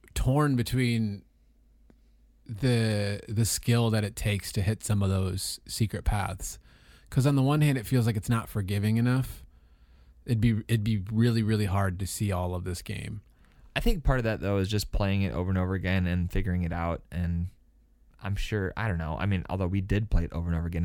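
Listening to the speech recording, nothing stood out as a technical problem at any point.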